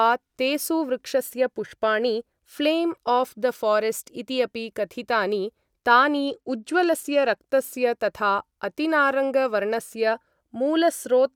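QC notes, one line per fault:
6.27–7.38 s, Bluetooth SBC bit pool drop: for about 1.1 s the treble turns dull and a gritty noise rises under the speech. This sounds like the encoder halving its bit pool, roughly 28 down to 14, which fits an audio bitrate near 108 kbps. With so few bits, the top sub-bands go almost empty and the lower ones are coarsely quantised until the rate recovers.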